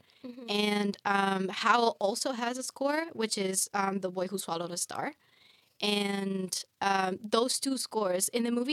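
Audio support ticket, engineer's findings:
Fast, rough tremolo on the speech, a robotic flutter riding the level for the whole clip, dipping and swelling by about 6 dB at around 20 Hz. Overlap-add ripple. Probable component: frame-based processing stage (resynthesis). Mechanism: windowed frames overlap at a spacing whose windows don't sum to constant gain, so the level peaks and sags once per frame.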